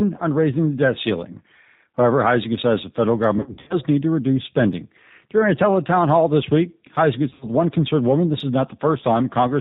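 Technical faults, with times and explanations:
Throughout: G.729 codec. The whole clip has that telltale narrowband VoIP sound, nothing above 4 kHz, and the speech comes across a bit rough and synthetic, which fits an 8 kbit/s G.729A stream. The codec doesn't send the waveform. It rebuilds each 10 ms frame from a vocal tract filter, a pitch predictor and a handful of pulses, so the fine detail gets swapped for an approximation, and you can plainly hear that here.
3.38–3.80 s and 7.30–7.47 s: VoIP packet loss concealed by the speech codec. In the first stretch about 210 ms of audio goes missing in patches over roughly 320 ms, and the longest gap is 70 ms. The second loses about 90 ms over 120 ms, with a longest gap of 60 ms. During those gaps the decoder keeps running on its last pitch and filter, so the sound smears into a buzzy tone or a coloured noise that fades. Because each frame builds on the one before, the speech stays weak and a little off for a moment after the packets come back.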